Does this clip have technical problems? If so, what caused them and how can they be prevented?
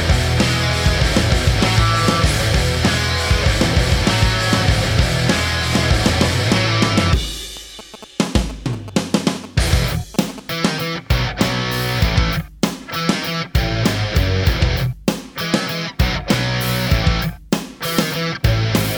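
Yes. From 7.57 to 10.40 s there is GSM signalling bursts interference: a galloping pattern of short buzzes repeating at about 217 Hz, sitting roughly 15 dB below the main sound. A nearby 2G phone exchanging signalling traffic radiates pulsed RF, which the audio circuitry rectifies into audible bursts. Keep phones away from the recording chain or switch them to flight mode, and use shielded, well-grounded cabling.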